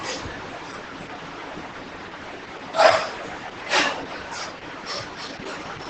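Opus voice compression runs throughout the speech, and the sound points to a low bitrate of around 10 kbps. The linear-prediction coder renders the excitation coarsely, leaving the voice muffled, hoarse and faintly robotic. A spectrogram shows nothing above 8.6 kHz.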